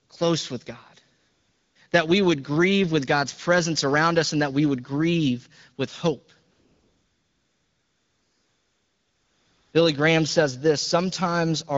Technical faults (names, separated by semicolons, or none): AMR comfort noise